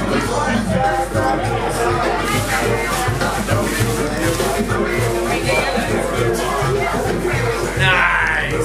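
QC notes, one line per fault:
Throughout, mains hum: a steady 50 Hz tone with low harmonics, only about 10 dB below the sound, from power-line coupling; its fixed pitch separates it from broadband rumble.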